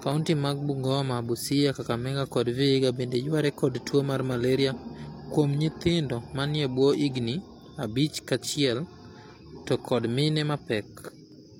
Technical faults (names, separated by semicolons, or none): clock drift buffer slips